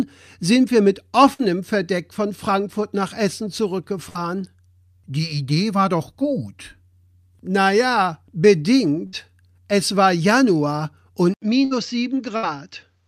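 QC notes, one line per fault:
1.33 s, 4.09 s, 9.07 s, 11.65 s and 12.37 s: burst of packet loss. Each time, roughly 60 ms of audio fails to arrive. The receiver covers the gap by stretching the last sound for about 55 to 60 ms and fading it, so voiced parts become a short held buzz and other parts a dying hiss. The speech then picks up with about 60 ms skipped. The smeared, fading fill and the jump in the speech distinguish this from a plain dropout to silence.
11.34 s to end: input switched to a poorer device, most likely a change of microphone or a move to a headset call profile. The speech cuts out for about 80 ms and then returns a few dB quieter, duller and boxier. Nothing reaches above 7.6 kHz, and a faint new noise floor sits well below the speech. Because the tone, level and background all change together at one instant, after a short silence, this is a device switch rather than a gradual EQ or gain change.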